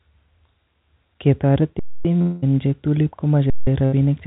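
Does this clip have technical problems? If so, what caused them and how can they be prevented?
Yes, the speech has four faults of three kinds, heard over a G.711 A-law call path whose band stops at 4 kHz.

Underrun with held sample, at 1.79 to 2.05 s (256 ms) and 3.50 to 3.67 s (171 ms, which fits a run of about 8192 samples at 48 kHz). The output buffer ran dry, and the converter froze on its last value. The sound stops abruptly with almost no click. It resumes softly because no speech was skipped and playback continues where it paused. On a waveform each gap is a perfectly flat line. On a spectrogram it is a blank vertical band with no energy. Prevention: enlarge the playback buffer or raise the audio thread's priority so it is refilled on time.

Long network dropout, at 2.22 to 2.44 s. The sound sustains and fades for about 204 ms, and then speech returns with roughly 200 ms missing, likely because a long stretch of packets never arrived. 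On a spectrogram the last harmonics smear horizontally and dim, then the pattern jumps to later speech. The waveform shows a decaying repetitive envelope. Prevention: use a more stable network route or add redundancy such as forward error correction.

Burst of packet loss, at 3.85 to 3.94 s. About 80 ms of audio went missing, and the receiver concealed it for about 73 ms by stretching the preceding sound and fading it out. The result is a brief held sound that fades, then a skip forward. A spectrogram shows a short, uniform, dimming stripe where the formant movement stops. The waveform shows repeated cycles shrinking in level. Prevention: use in-band FEC or a codec with stronger loss concealment.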